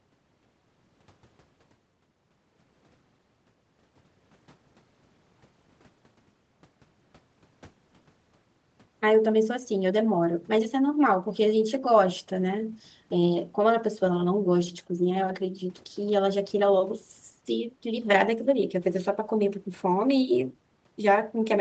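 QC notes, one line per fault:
No faults found: the speech has passed through normal call microphone processing and an Opus call path, and its content stops at 8 kHz, as that codec's wideband setting would leave it.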